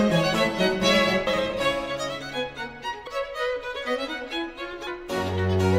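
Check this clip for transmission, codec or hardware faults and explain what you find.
Three skips are audible, at 1.27, 3.07 and 4.87 s, consistent with audio missing between chunks. The sound jumps forward about a fifth of a second each time, likely from 2 s processing chunks dropping material at each handover. A spectrogram shows abrupt vertical seams.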